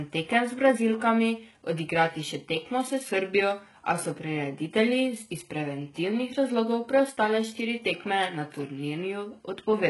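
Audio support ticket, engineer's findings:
HE-AAC compression, throughout. Speech treble sounds synthetic: s sounds gritty and lispy, upper harmonics misaligned with the body of the voice. Likely a low-bitrate HE-AAC stream, heavy damage consistent with roughly 12 kbps; band replication rebuilds the top from copied lower bands, nothing above 11.5 kHz.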